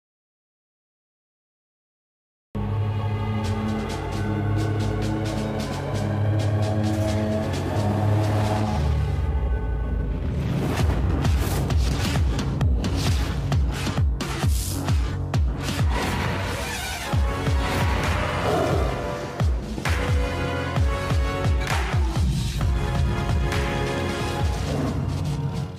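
Right from the first moment, the clip sits in dead digital silence until about 2.55 s, with no hiss or room tone at all. That's an audio dropout to silence that was already under way when the file begins. The input was likely lost for a moment, say a loose connection or a mute left on, while the recorder kept writing silence. At 2.55 s the sound simply cuts in mid-flow, and whatever came before it is gone.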